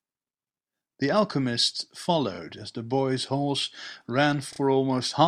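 A speech recording with two stutters from repeated frames. At 2.35 s a 32 ms block plays twice, and at 4.53 s another 32 ms block plays three times, adding 32 ms and 64 ms. Each block fits a single compressed frame written out again. Unlike a dropout, no audio goes missing; the same fragment is heard again and the clip grows longer.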